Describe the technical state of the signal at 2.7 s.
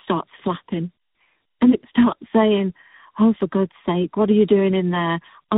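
At 2.7 s you're hearing tandem speech coding, and it runs the whole clip rather than just that moment. The sound fits speech passed through a low-rate AMR-NB-style coder, then G.711, then G.726, so it got decoded and re-encoded at each handoff, with each stage working on the previous one's damage. It comes across rough, noisy, muffled and warbly, and nothing reaches above about 3.8 kHz.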